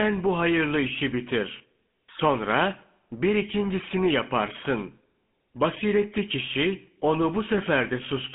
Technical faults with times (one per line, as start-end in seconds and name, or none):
0.00-8.35 GSM full-rate codec